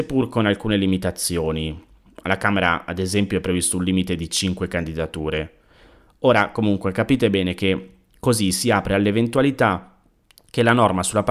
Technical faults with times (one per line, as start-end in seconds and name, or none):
none